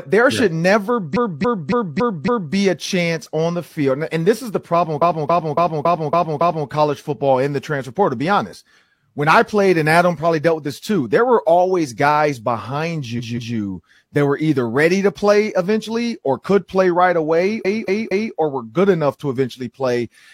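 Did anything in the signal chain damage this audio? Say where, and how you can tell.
Yes. The damage is repeated frames, from the codec or storage stage. The speech stutters four times: 1.12 to 2.51 s after "there yeah should never", 4.97 to 6.64 s after "this is the problem", 13.15 to 13.52 s, and 17.60 to 18.30 s after "could play right away". Each time, one short block loops: 279 ms in the first two, then 186 ms and 232 ms. Identical blocks playing back to back point to compressed frames being written more than once. Every loop adds its length to the clip.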